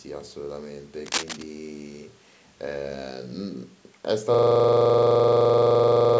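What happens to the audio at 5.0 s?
At 5.0 s the computer or driver has frozen, a system hang loop that runs from 4.34 s to the end while the sound hardware keeps replaying one 42.7 ms slice, which fits a 2048-sample buffer. The speech becomes a rigid buzzing stutter repeating at 23.4 Hz.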